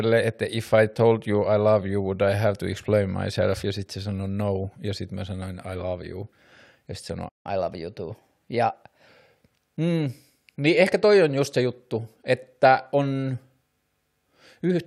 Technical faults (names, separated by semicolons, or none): playback stall; catch-up at higher speed